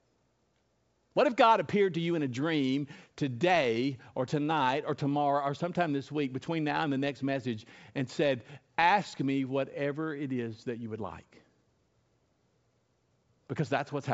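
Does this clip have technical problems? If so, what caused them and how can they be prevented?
No, the speech comes through a G.722 wideband telephone path at 64 kbit/s, where any coding effects are faint at most and nothing points to a technical problem.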